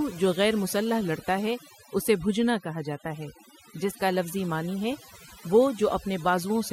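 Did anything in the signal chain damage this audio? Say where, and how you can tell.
Yes. Overdone noise removal runs through the whole clip, a processing-stage fault. The gaps between phrases drop to near silence with twinkling specks. A noise reducer set too aggressively is cutting individual frequency bands hard whenever they sit close to its noise estimate. The quieter parts of the speech fall into that range, so they are removed along with the noise.

The wireless microphone noise hit comes in the analogue stage ahead of the converter, from 4.26 to 4.31 s, just after "جاتا ہے جس کا" and before "معنی ہے وہ". It is a brief swish of static, about 50 ms long, laid over the speech. The FM radio link faded for an instant as reflected signals cancelled, and the receiver's own noise rose up and covered the speech until the signal recovered.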